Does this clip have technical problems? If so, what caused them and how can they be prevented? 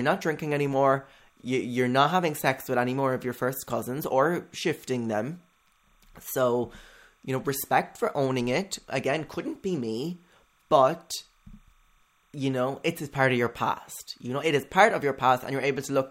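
Yes, there's timecode bleed running the whole way through: a faint chirping warble, roughly 40 dB under the speech, flipping between tones near 1 and 2 kHz at a 30 frames-per-second code rate, from linear timecode leaking over. Keep timecode on separate, well-shielded cables and tracks, away from audio lines.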